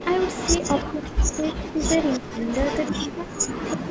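From 0.0 to 0.85 s, 1.3 to 3.16 s and 3.57 s to the end, an echo leak trails the speech by about 339 ms at about 10 dB down: a delayed second copy, likely from a loudspeaker echo the canceller missed.

Speech suppressed in double talk hits 0.86 to 1.29 s, 1.65 to 1.81 s, 2.19 to 2.45 s and 3.01 s to the end, plunging up to about 40 dB. The suppressor likely gated its own talker along with the loudspeaker echo, leaving gaps rather than an added copy.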